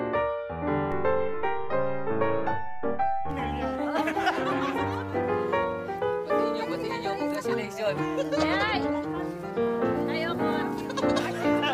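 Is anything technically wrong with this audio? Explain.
Yes. A DC step runs from 0.92 to 3.31 s. The waveform's zero line jumps by about -29 dBFS, holds, then returns. That sudden baseline shift is heard as a low thump at each edge. The sound itself carries on unchanged.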